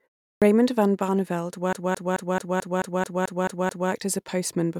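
At 0.32 s there's a clipped start after a pause: the output seems to have dozed off during the opening 0.32 s of silence and needed a moment to wake, so roughly the first 98 ms of speech is swallowed and the sound lurches in abruptly. From 1.73 s to 3.91 s it's a classic case of a CD stuck on one turn. The same 218 ms chunk plays ten times over, each jump marked by a tiny mute, giving that quick, evenly spaced stutter you get when a scratch keeps kicking the laser back a track.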